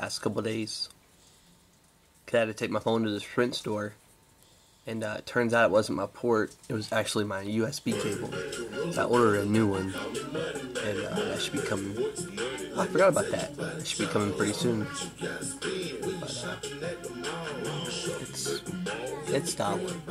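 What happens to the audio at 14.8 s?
Nothing goes wrong at 14.8 s; the audio plays through that moment intact, with no dropout, click, glitch or other audible fault.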